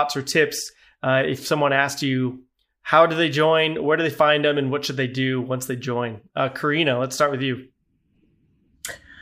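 No technical faults are audible anywhere in the recording.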